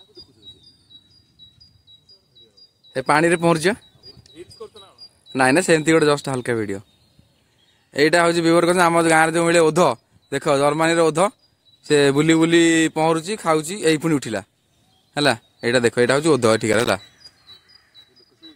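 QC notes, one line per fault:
16.73–16.92 s, loose connector crackle: a short irregular burst of scratchy crackle, about 0.19 s long. A worn contact keeps making and breaking, chopping the signal.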